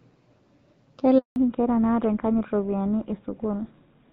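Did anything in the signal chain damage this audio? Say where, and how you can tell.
Yes. A handover gap in the network silences the speech from 1.18 to 1.36 s. No frames arrived during those 180 ms of switching.

From 1.36 s, a codec fallback to narrowband cuts everything above 4 kHz. The duller speech fits a drop from HD Voice to GSM.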